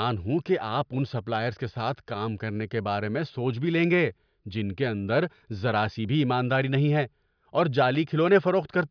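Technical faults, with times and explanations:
No technical faults are audible.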